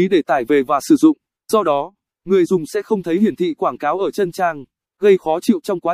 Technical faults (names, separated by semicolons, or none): none